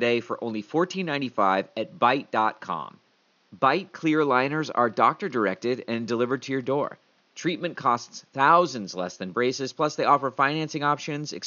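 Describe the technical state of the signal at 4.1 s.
At 4.1 s the speech is intact, with only the room's own background noise sitting about 41 dB beneath it.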